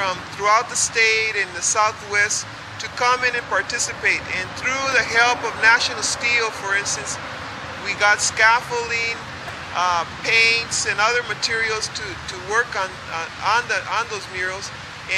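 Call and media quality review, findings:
Repeated buffer, 4.92 s: playback device underran and replayed its last block once. Heard as a single sharp click; block length about 2.9 ms, which fits a 128-sample buffer. Roughly 3 ms of audio dropped.

Repeated buffer, 9.48 s: same underrun, same block size, replayed three extra times. Hard joins close together give a brief buzz rather than a stutter; around 10 ms of audio lost.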